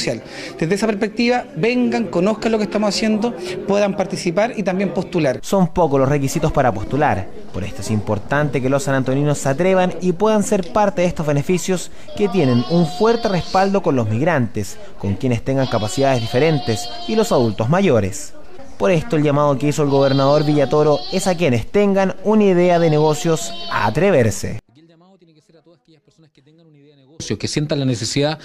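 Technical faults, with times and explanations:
24.59–27.20 s, one channel inverted: the sound collapses to a faint residue, about 32 dB down in mono, likely because one channel's polarity flipped and cancelled the shared content.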